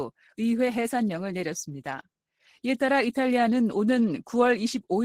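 No technical faults can be heard anywhere in the clip. The audio runs without dropouts, clicks, distortion or other disturbances.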